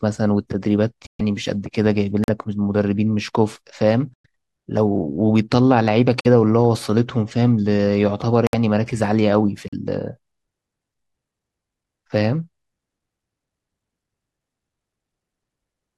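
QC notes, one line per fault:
1.07–1.21, 2.24–2.30, 4.14–4.26, 6.21–6.26, 8.47–8.55 and 9.68–9.74 s: corrupt frame muted. The speech drops into dead silence with a hard edge for 0.06 to 0.14 s each time. Damaged frames got rejected by the decoder and swapped for silence, and the gap lengths fit runs of a few frames. Timing stays intact.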